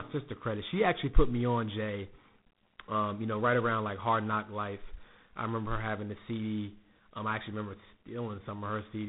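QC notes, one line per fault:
Throughout: tandem speech coding. The speech passed through two speech coders in a row, fitting CVSD then G.726 at 24 kbit/s, with a G.711 link between. Each coder reworks the last one's errors. Nothing sounds above 3.8 kHz, so it is muffled, rough and noisy.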